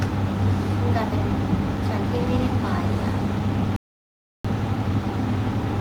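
A playback stall runs from 3.76 to 4.45 s: the speech cuts off mid-flow into about 0.68 s of dead silence, then resumes. The likely cause is the player running short of data, or its output thread being blocked, until it caught up.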